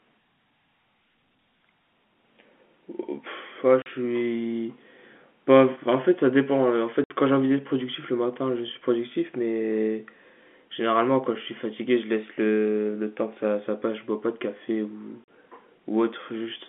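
Packet loss filled with silence breaks up this speech at 3.82 s, 7.04 s and 15.24 s: gaps of 40, 60 and 40 ms, consistent with 20 ms packets, are replaced by abrupt silence. The audio passes through narrowband G.711 telephone coding, with the band limited to roughly 200 Hz to 3.4 kHz.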